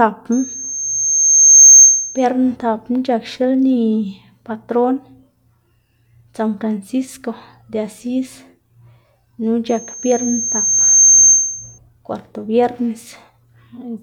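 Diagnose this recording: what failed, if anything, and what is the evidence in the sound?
Loudspeaker feedback squeal, an acoustic loop in the analogue reinforcement chain where the microphone hears its own loudspeaker. A single tone at 6.4 kHz swells from 0.32 s to 2.25 s and again from 9.69 s to 11.79 s, building over about a second and a half each time. It peaks at about 15 dB above the speech the first time and about 10 dB the second. At that frequency the loop gain exceeds unity, so the tone regenerates until the loop is broken.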